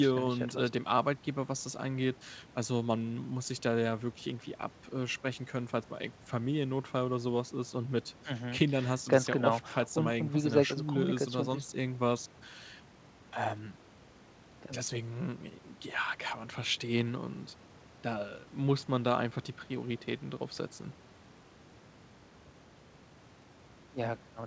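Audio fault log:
Nothing to log here: the speech comes over a normal WebRTC call path using G.722, which accounts for the ceiling at 8 kHz, with nothing going wrong along the way.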